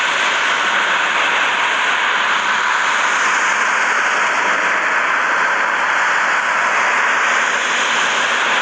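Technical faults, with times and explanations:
Throughout, doubled audio track: every event is followed by a second full-band copy roughly 150 ms later, about 5 dB quieter, with no decay or room colouring. This gives a dry slapback echo, likely from the sound being captured again through a slower path and mixed back in.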